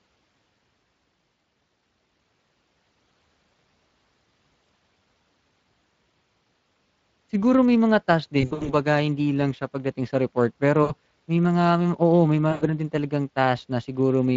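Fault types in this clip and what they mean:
Speex codec: The whole clip of speech passes through the Speex CELP codec at a setting that points to a bitrate of about 20 kbps, and the damage is plainly audible. Too few bits are left to code the excitation, so the voice comes out rough and grainy. That grain runs evenly through every second of the clip, which separates it from the brief dropouts. A fault that comes and goes is not this codec at work.
VoIP packet loss concealed by the speech codec: Packets went missing and the decoder filled each gap by extending its last pitch and filter while turning the gain down. The speech smears into a buzzy or noisy tail that fades. The longest spell runs from 8.41 to 8.74 s, with losses scattered across it and the longest unbroken gap about 80 ms. Shorter ones come at 10.83 to 10.92 s and 12.51 to 12.63 s. These are local smears with weak recovery, not the steady codec grain.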